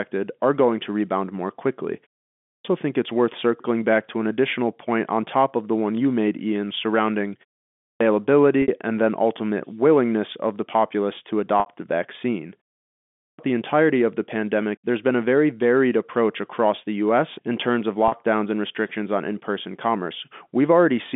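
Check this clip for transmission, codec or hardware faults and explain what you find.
Two faults affect the speech: clipped starts after pauses and packet loss with pitch repetition, both over a narrow telephone-band line.

Clipped start after a pause occurs at 2.40 to 2.65 s, between "to rebound more quickly" and "think it's worth circling", at 7.76 to 8.01 s, and at 13.17 to 13.39 s, just before "the entirety of the". After pauses of 0.4 to 0.64 s, the output device appears to drop into a low-power state and needs time to wake. Roughly 0.22 to 0.25 s of each onset is swallowed, so speech bursts in abruptly with its opening sounds missing.

Packet loss with pitch repetition occurs at 8.62 to 8.68 s, just before "and then ultimate willingness", at 11.60 to 11.66 s, and at 18.08 to 18.12 s. Audio went missing for 60, 60 and 40 ms, which fits three, three and two 20 ms packets. The receiver filled each gap by repeating the last pitch period and fading it out over about 50 ms, so the 40 ms gap sounds like a brief, slightly buzzy held tone, while the 60 ms gaps fade into silence before the speech returns with a short cross-fade.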